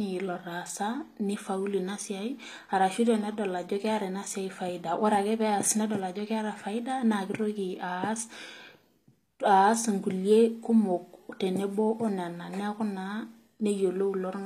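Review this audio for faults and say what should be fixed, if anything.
Throughout the speech the sibilants come out gritty and metallic, and the top end sounds synthetic. That is plainly audible HE-AAC compression damage, likely from a low-rate encode, which fits roughly 24 kbps. The codec spends its bits on the lower spectrum and regenerates the treble by copying lower bands upward under a coarse envelope, so the rebuilt harmonics miss the true ones. On a spectrogram, the upper bands look like blocky, repeated copies of the region below, with nothing at all above about 14.9 kHz. Encoding from the original source at a higher bitrate, or with plain AAC or a lossless format, would prevent it.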